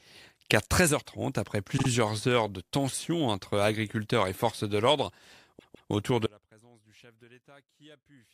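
At 1.77 to 1.87 s there are repeated frames: a 52 ms block of the compressed stream plays two extra times, stuttering and adding about 105 ms. At 5.58 to 5.89 s a longer 157 ms block repeats twice more, adding about 314 ms.

From 6.26 s to the end there is an audio dropout to a faint residue. The sound cuts off abruptly, leaving only a faint leak roughly 30 dB below normal level, likely because the signal was lost while the downstream path stayed live.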